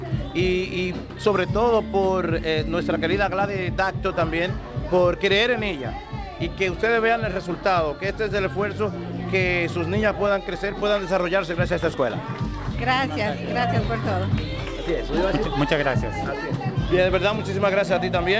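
Nothing goes wrong anywhere in this one; it has simply come through a call path whose top end stops at 8 kHz, which fits a wideband call codec like G.722.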